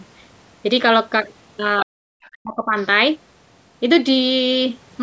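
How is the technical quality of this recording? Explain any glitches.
Echo cancellation problems mar the middle of the speech, between roughly 1.8 and 2.9 s, on a call-processed microphone path whose bandwidth tops out at 8 kHz.

Other side's voice leaking through, at 1.80–1.85 s, 2.22–2.29 s and 2.81–2.86 s: the echo canceller likely failed to fully remove loudspeaker playback, so brief scraps of a second voice surface, the first fairly strong, the later ones faint.

Speech suppressed in double talk, at 1.84–1.92 s and 2.33–2.76 s: with both sides talking, the canceller likely turned everything down, and the main voice drops out sharply, by roughly 40 dB, for a short blip and then a longer gap.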